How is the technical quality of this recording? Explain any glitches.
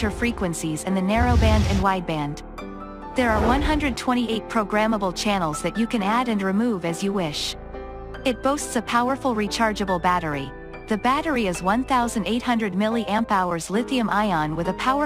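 The technical quality of this recording is sound, and there are no glitches to explain.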